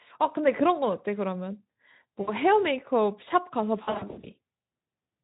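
At 2.21 s, VoIP packet loss concealed by the speech codec smears about 60 ms into a fading buzz or noise. The decoder repeats its last pitch. From 3.83 to 4.26 s, scattered gaps of up to 60 ms return.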